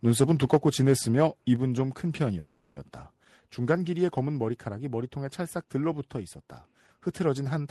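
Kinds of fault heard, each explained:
microphone overload: From 0.07 to 0.93 s the loudest speech peaks are flattened against the converter's ceiling, adding a harsh, crackling edge. The input was likely driven about 6 dB past full scale, clipping around 2 percent of samples.
microphone volume stepped down: Speech and background drop abruptly in level twice, by about 2 dB at 0.55 s and about 3 dB at 1.56 s. The likely cause is the call software cutting the device's input gain in single steps in response to the overload.
call audio freeze: From 2.39 to 2.78 s the sound is replaced by a fading continuation of the preceding audio that never reaches silence. Delayed packets likely emptied the jitter buffer, inserting about 370 ms of fill. Nothing is lost, so playback resumes later than before.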